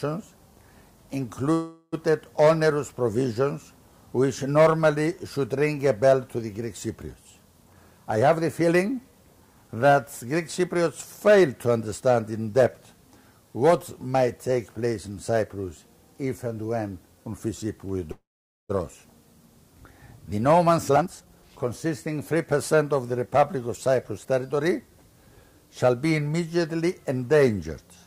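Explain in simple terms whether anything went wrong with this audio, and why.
Two kinds of fault occur. A call audio freeze hits at 1.53 to 1.94 s as a fading buzz, then at 18.12 to 18.71 s as near silence. It likely comes from delayed packets. Nothing is lost, just paused. A jitter buffer speed-up follows each one, at 7.64 to 10.83 s and 20.63 to 24.89 s. The sound hurries, at 111% and 113% speed, to recover the lost time.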